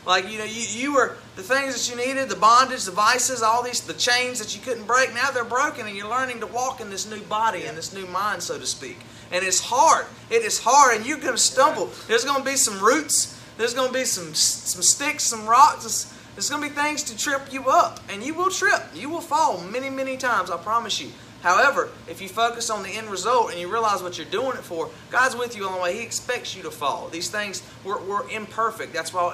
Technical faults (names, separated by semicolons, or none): none